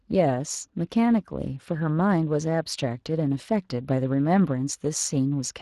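Speech passed through the Speex codec, roughly 22 kbps by the sound, leaving plainly audible codec damage throughout.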